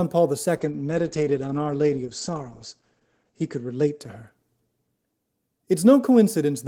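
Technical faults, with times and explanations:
0.59–6.68 s, call bitrate drop: at 0.59 s the speech turns rough and muffled and stays that way to the end, with a worst stretch lasting about 2.3 s. The encoder was given far fewer bits, which fits a fall from around 40 to around 10 kbps, so it quantised coarsely and narrowed bandwidth from 20 kHz to 8 kHz. On a spectrogram, energy above 8 kHz vanishes behind a flat ceiling, and the remaining harmonics look smeared and blocky.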